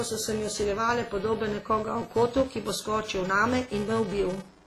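Right from the start and all the way through, there's a steady buzz at 345 Hz riding on the speech. That's a filter restarted on every block: it forgets its state and starts each block from silence, so every block opens with a tiny tick. The rate fits a 128-sample block, and the buzz swells and fades with the level.

Also throughout, the speech sounds heavily smeared and washy, with ringing and a hiss that breathes along with it, and nothing above 15.3 kHz. The likely cause is WMA compression at a low bitrate, around 24 kbps, with quantisation noise spread over long blocks and weak detail thrown away.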